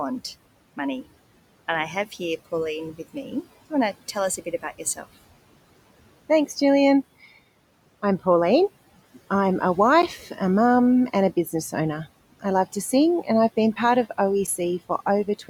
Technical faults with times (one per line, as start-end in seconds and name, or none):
4.37-5.04 speech cut by the noise suppressor
6.44 block of digital silence
10.02 block of digital silence
14.47 block of digital silence